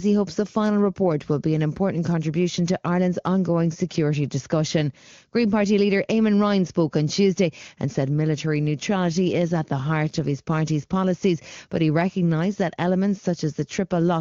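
No technical faults occur at any point in the recording.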